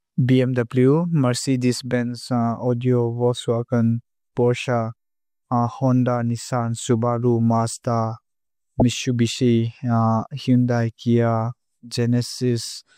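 At 8.79 to 8.82 s, damaged data in a compressed stream makes the decoder lose sync, leaving a brief glitch.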